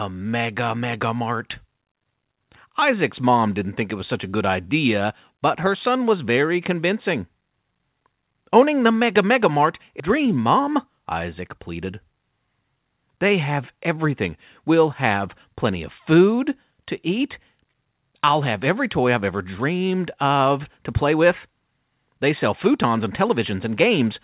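At 10.0 s there's a skip ahead: roughly a second of speech just vanishes and playback lands straight on later audio with no gap at all, so the two sides butt together abruptly. That's what you get when a chunk is dropped in transit or the jitter buffer throws it out while newer audio is already queued.

Right after, from 10.1 to 11.93 s, the jitter buffer speed-up kicks in. The receiver is still holding more than it wants, so it trims tiny pitch-period slices over and over, around 150 ms in total. Speech runs at about 108% with the pitch unchanged and sounds a bit rushed. Throughout, the band stops at 4 kHz, which fits a narrowband G.711 call codec.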